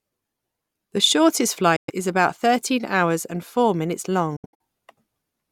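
Speech clip with two gaps, likely Bluetooth dropouts from late packets: the sound cuts to silence at 1.76 to 1.90 s, before "is about thirteen hours", then resumes as if it had played on. At 4.36 to 4.60 s, after "hours and four minutes", there are scattered short holes, the longest about 70 ms.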